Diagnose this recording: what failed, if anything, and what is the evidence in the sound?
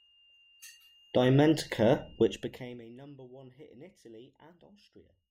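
Zipper noise from 2.24 to 2.94 s, as the level falls by about 25 dB just before "hit in". The gain is being updated in unsmoothed steps, roughly 200 per second, at the buffer or processing stage, so each jump leaves a small click and the fade sounds like a fine buzz.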